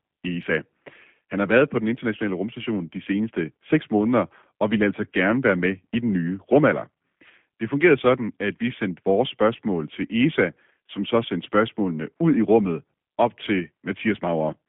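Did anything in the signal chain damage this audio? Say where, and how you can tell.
Yes, at the codec stage throughout: G.729 coding. The speech is confined to roughly 150 Hz to 3.5 kHz and has a rough, buzzy, synthetic edge, which fits an 8 kbit/s model that rebuilds each frame from a filter and a few pulses. A plain telephone-band filter would narrow the sound without that roughness.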